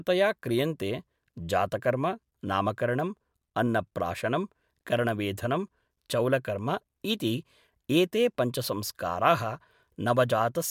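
No technical faults can be heard anywhere in the speech, with the signal holding steady and continuous throughout.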